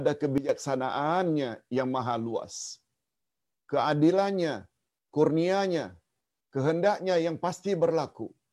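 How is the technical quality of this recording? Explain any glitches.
The recording has one glitch, a sudden gain jump from 0.38 to 0.49 s. The digital gain was most likely switched without a ramp, cutting the level by about 12 dB in one step. Speech and background noise drop together, then return abruptly.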